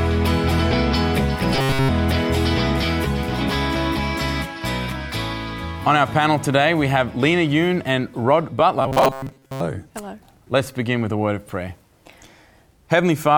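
At 1.55–1.89 s and 8.82–9.60 s, robotic sound from repeated short buffers: a rigid metallic buzz at 134 Hz, likely from a roughly 7.5 ms chunk being looped while real audio is skipped. It is present throughout the first event and for most of the second. The spectrogram shows evenly spaced 134 Hz harmonic stripes, and the waveform shows identical repeating cycles.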